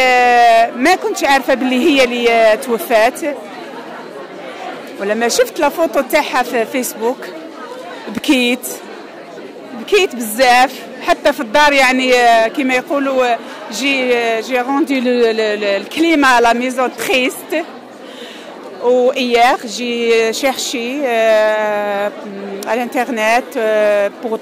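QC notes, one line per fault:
No fault found in this sound.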